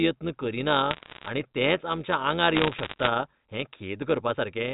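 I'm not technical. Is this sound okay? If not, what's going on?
No. Throughout the speech there is overlap-add ripple. The sound was split into short overlapping slices and stitched back together, but the overlaps don't blend evenly, so the loudness pulses up and down around a hundred times a second. That is too fast to hear as separate beats, so it comes across as a buzzy, robotic roughness on every word. Unlike a slow wobble or a warbling pitch, the pitch stays steady and only the loudness flutters.

There are also two bursts of bit errors on a digital phone line, from 0.91 to 1.28 s and from 2.55 to 3.07 s. On the telephone line that carries this audio, occasional bits of the digital signal got flipped, and each one spoils a single tiny sample. What you hear is sharp ticks and crackle laid over the speech, which itself keeps going. That sets it apart from dropouts, where sound goes missing, and from distortion, which roughens the whole voice.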